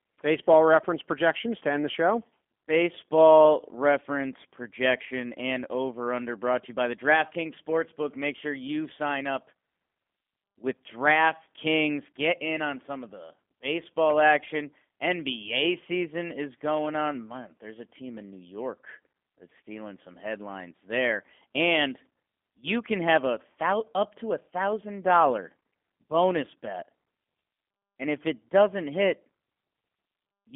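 From start to end, the speech has passed through the G.729 codec, most likely the G.729A variant, at a rate that points to 8 kbit/s. The codec throws away the waveform and resynthesises it from a vocal-tract filter, a pitch predictor and a few pulses per frame, inside a telephone band of 250 Hz to 3.4 kHz. The result is thin and boxy with no upper sibilance, and the plainly audible codec damage makes the voice sound rough and faintly synthetic.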